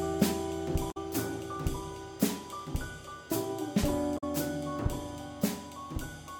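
At 0.88–0.97 s and again at 4.14–4.23 s, damaged data in a compressed stream makes the decoder misread frames and resync, giving a brief disturbance in the music.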